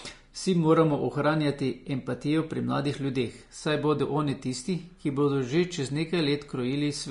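Low-bitrate Vorbis compression is the likely cause, running through the whole speech clip and consistent with a rate around 34 kbps. Nothing survives above 10.6 kHz, and the coarsely quantised treble turns into a hissy, grainy wash, roughening tones and blurring consonant attacks.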